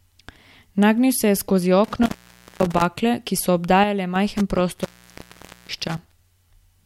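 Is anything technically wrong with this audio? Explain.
Yes. The speech has two technical faults.

Intermittent contact affects two stretches, 1.84 to 2.85 s and 4.37 to 6.16 s. A loose plug or cable connection briefly breaks the signal path. The speech drops out with crackle at the edges. Faint hiss remains while the line is open. The first gap lasts about 0.52 s. The second is longer, about 0.84 s. Both sit inside bursts of unstable contact.

A sudden gain jump occurs from 3.84 to 4.16 s. The level falls by about 6 dB in one step, with no fade. The speech and the background noise drop together, so the whole signal shifts at once. This is likely a digital gain setting applied instantly rather than ramped. The level then steps back, leaving a short, clearly quieter section.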